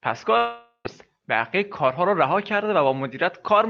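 Speech clip with a long network dropout from 0.37 to 0.87 s, likely a lost packet stretch: about half a second goes missing, filled by a fading concealment buzz then brief silence, resuming at "بقیه کارها را رها".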